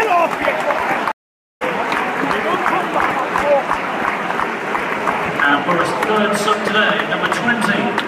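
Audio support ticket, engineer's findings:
Stream reconnect at 1.12–1.63 s. Dropout of about 0.49 s of silence, then audio resumes roughly 0.4 s further along, so a short stretch of content is skipped. Probable component: network/streaming layer. The connection dropped, the player reconnected and started a fresh decoder mid-stream, picking up at the live position rather than where playback had stopped.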